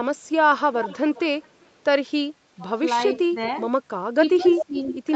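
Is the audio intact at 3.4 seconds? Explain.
No. Around 3.28 to 3.36 s the speech briefly dips sharply, likely speech suppressed in double talk, where the echo canceller turned down the talker along with echo.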